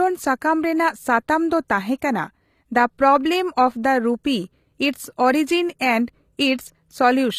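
Throughout the speech there is plainly audible codec damage, most likely from HE-AAC compression at a low rate, which fits about 24 kbps. Nothing is present above 14.9 kHz. The treble reaches up high, but its harmonics do not align with the lower band. That fits spectral band replication, where the upper range is rebuilt by copying lower bands upward under a coarse envelope rather than coded directly. Sibilants come out gritty, metallic or lispy.

At 1.68 s there is a pre-echo, a brief hiss about 18 ms long just ahead of a sharp onset. The transform codec spread quantisation noise sized for the loud attack across its whole block, so the quiet interval before the attack also filled with noise. The result is a smear leading into the transient, and the attack itself sounds softer and less defined than it should.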